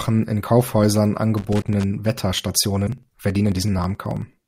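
Speech, with three distinct faults. From 1.37 to 1.84 s there is loose connector crackle: an irregular, scratchy burst as a worn contact makes and breaks, chopping the signal. Its random spacing sets it apart from the evenly timed ticks later on. Inside that burst, at 1.61 to 1.64 s, and again at 2.86 to 2.89 s, comes a brief glitch with a jump forward in the audio, lasting about one 26.1 ms frame. It is likely a broken MP3 bit reservoir, where frames lost from the stream leave the following frame decoding borrowed bytes from the wrong place. Unlike crackle, it is a single short garble, not a scratchy spell. From 2.33 to 4.38 s, periodic USB or driver dropouts tick steadily every 54 ms, each skipping around 10 ms of audio, about forty in all. Their clockwork regularity distinguishes them from the connector noise.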